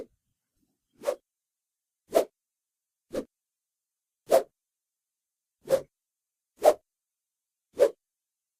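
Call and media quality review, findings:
No audible faults found in this sound recording.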